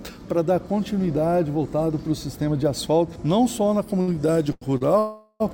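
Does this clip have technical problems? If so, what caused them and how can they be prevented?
Yes. Short stalls from late packets occur at 4.01, 4.52 and 4.77 s. Each time the jitter buffer runs dry, the last sound is held for 60, 96 and 33 ms, then resumes with nothing lost. A deeper or adaptive jitter buffer would absorb these delays.

A call audio freeze runs from 4.99 to 5.42 s. The last sound continues as a fading buzz for 414 ms, likely because packets were held up in transit. Prioritising call traffic on the network would help prevent this.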